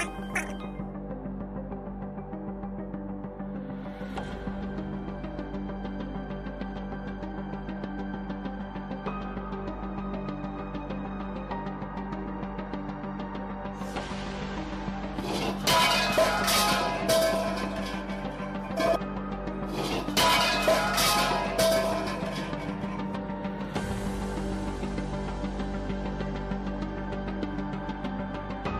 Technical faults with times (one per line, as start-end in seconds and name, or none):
none